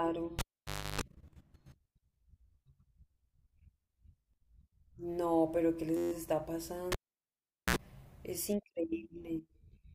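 Speech with two cable pulled and plugged in events, at 0.39–1.01 s and 6.92–7.76 s. Each begins with a pop, drops to near silence for about 0.57 s and 0.79 s, then buzzes while only the plug tip makes contact: 50 Hz mains for 0.32 s the first time, a brief 60 Hz buzz of 0.06 s the second. Another pop follows as the sound returns. That pop-silence-hum sequence distinguishes it from a plain dropout. Between 5.97 and 6.12 s there is a system hang loop. The sound hardware kept replaying the same 11.6 ms slice about a dozen times while the driver stalled, which fits a 512-sample buffer. The exact repetition gives a steady 86 Hz buzz rather than the uneven stutter of a buffer underrun, and little or no audio is lost.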